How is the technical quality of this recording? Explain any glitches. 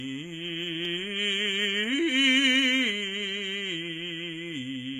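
The quality is limited by one fault that runs through the whole music clip. It is low-bitrate audio saved at a high bitrate. Nothing is present above 14.5 kHz, so the top end sounds dull. The likely cause is an early low-bitrate encode, around 20 kbit/s HE-AAC, later re-saved as high-bitrate MP3. The second pass cannot restore what the first removed.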